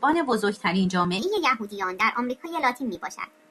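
A section at the wrong speed runs from 1.19 s to the end of the clip at 3.51 s. From that point the speech plays about 1.21 times faster than it was recorded, and because speed and pitch move together, the voice jumps up by about three semitones and sounds hurried and thin. The sudden change suggests this stretch was likely played or edited against the wrong clock rate.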